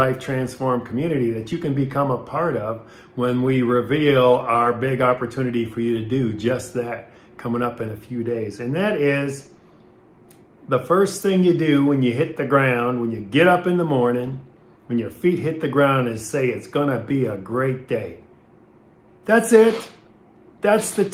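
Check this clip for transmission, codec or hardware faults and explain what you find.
Nothing stands out here as a transmission, codec or hardware problem, so there's nothing to flag in this one.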